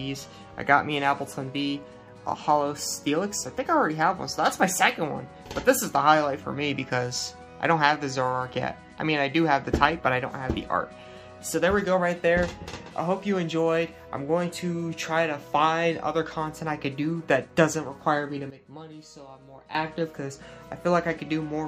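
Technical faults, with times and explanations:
18.50 to 19.75 s, sudden gain jump: a digital gain change likely applied from one sample to the next with no ramp drops the level by about 12 dB, so the sound and its background noise fall together abruptly, then return at 19.75 s.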